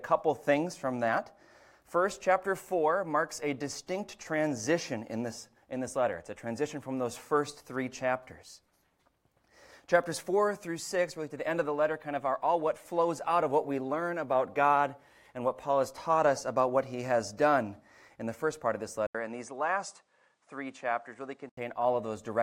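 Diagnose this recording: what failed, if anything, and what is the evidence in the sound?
At 19.07 s the audio drops out for 80 ms, then returns duller, with nothing above 10.5 kHz and a new noise floor roughly 50 dB below the signal, with no real level change. At 21.57 s the full bandwidth returns. This is likely an input switched to a poorer device at the driver stage. On a spectrogram there is a brief blank column at 19.07 s, a flat ceiling at 10.5 kHz until 21.57 s, and a faint new noise band throughout that span.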